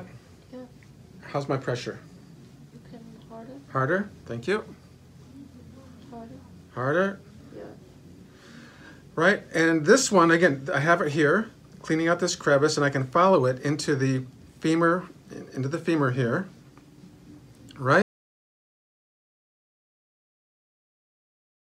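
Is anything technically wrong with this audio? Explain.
Yes. From 18.02 s to the end, an audio dropout to silence: the sound cuts off abruptly into silence with no room tone, likely because the input was lost while recording continued. Unlike a fade-out or noise gate, nothing tapers and no background remains.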